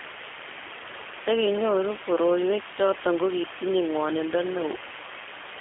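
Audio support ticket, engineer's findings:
Low bit depth with dither, whole clip: constant, even hiss sitting nearly as loud as the speech, with no distortion on peaks. The signal uses only about 4 bits, and the dither turns rounding error into steady white noise. Spectrogram: uniform grey floor across all frequencies. Waveform: thick noise band never dropping to silence.

G.729 codec, whole clip: speech rough, slightly synthetic, thin telephone tone, with plainly audible codec damage. Behaviour fits G.729A at 8 kbit/s, which rebuilds speech from a vocal tract filter, pitch predictor and sparse pulses. Spectrogram: energy confined to roughly 250 Hz–3.4 kHz, empty above 3.5 kHz.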